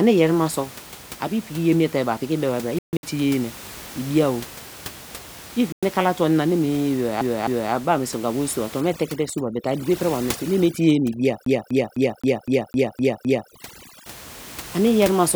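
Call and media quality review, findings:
Bluetooth dropout, 2.79–3.03 s: broken gaps scattered over about 240 ms, longest hole about 140 ms. Second gap at 5.72–5.83 s, about 100 ms, just before "kala tuo anina". Silences, then the sound resumes as if it had kept playing. Likely cause: late packets on the wireless link discarded by the headset.

CD stuck on one turn, 7.21–7.73 s: the same 257 ms segment plays twice with a short mute at each jump, ending before "be ba meniso wor". Again at 11.45–13.5 s, eight repeats of the 257 ms loop. A disc scratch sends the laser back one track every revolution, giving an even stutter.

Overdone noise removal, 8.81–14.06 s, starting after "wor so a tuo": the background drops and breaks up into twinkling specks. An overly aggressive noise reducer is switching individual frequency bands off whenever they approach its noise estimate, which takes quiet speech detail with it. 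The room noise underneath, about 18 dB below the speech, is what gets stripped out here.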